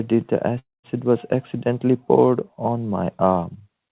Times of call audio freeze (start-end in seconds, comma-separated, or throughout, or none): 0.59-0.87